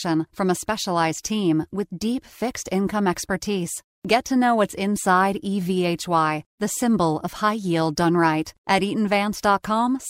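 Nothing goes wrong anywhere in this speech recording, so there's no fault to point to at any moment.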